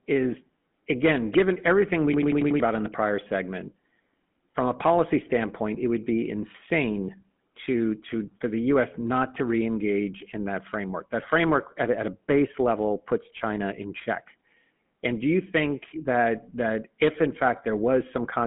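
Throughout, the speech has a buzzy, gravelly roughness and sits in a narrow telephone band of roughly 150 Hz to 3.4 kHz. This is the GSM full-rate codec, which fits a 13 kbps stream. It rebuilds the voice from a vocal-tract model driven by thinned, regularly spaced excitation pulses.

From 2.14 to 2.60 s, between "again given everything we" and "about in the prior", a rapid machine-gun stutter replaces the speech. This is a system hang loop. The system froze while the hardware kept replaying one 92.9 ms stretch of its ring buffer, five times at 10.8 Hz, which fits a 4096-sample buffer. About half a second of audio is lost.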